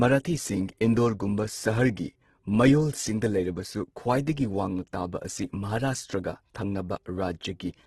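Throughout, the speech sounds grainy and rough, likely from heavy Opus compression at around 12 kbps. A spectrogram shows noise-filled bands and nothing above 12.1 kHz.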